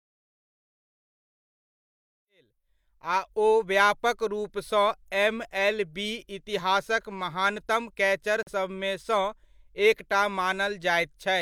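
A speech clip, which fades in smoothly from around 2.5 s to 3.7 s, has a brief hole at 8.43 to 8.51 s where the sound mutes and then resumes. This is a digital broadcast dropout: the receiver lost the signal or hit corrupted data and muted until clean frames returned, discarding about 43 ms of programme, which points to a single lost frame.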